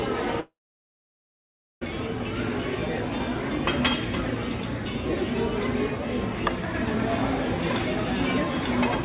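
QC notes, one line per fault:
0.40–1.89 s long network dropout: a brief fading buzz or hiss, then about 1.3 s of silence; sound resumes with that stretch missing, not delayed, likely from lost packets.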